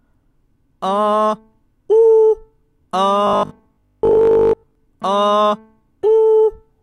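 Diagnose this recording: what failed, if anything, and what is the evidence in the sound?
The failure is at the driver or buffer stage. From 3.27 s to 4.75 s the sound collapses into a rigid, metallic buzz at 50 Hz. This is robotic sound from repeated short buffers. A 50 Hz pitch means a segment about 20 ms long is being replayed back to back, and it loosely tracks the original contour. This likely comes from repeated buffer underruns. Fresh audio arrives too slowly, so most of that stretch is filled with repeats while the real signal is dropped.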